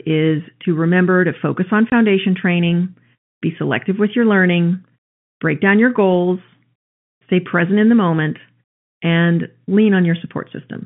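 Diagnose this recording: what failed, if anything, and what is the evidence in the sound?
The network stage dropped a single packet, and the receiver substituted silence: packet loss filled with silence. From 1.90 to 1.92 s the speech cuts out for 20 ms, one packet's length, with hard edges against the band-limited G.711 telephone audio.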